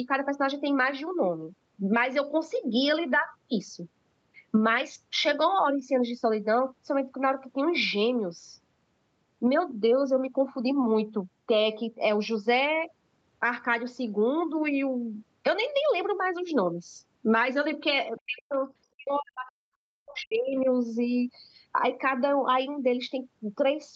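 From 18.26 to 18.6 s and again from 18.95 to 20.68 s, the speech drops out almost completely in pieces, likely speech suppressed in double talk, with the echo canceller turning down both its own talker and the loudspeaker echo.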